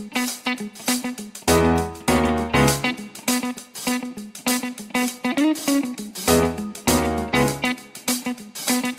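No technical faults can be heard anywhere in the audio.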